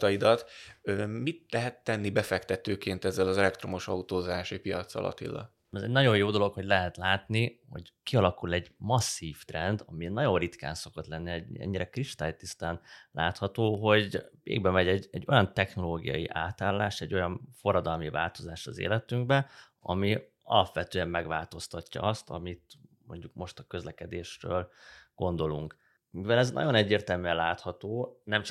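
At 13.75 s there's a single sharp click, likely dropped samples: a handful go missing, well under a millisecond, so the waveform jumps abruptly.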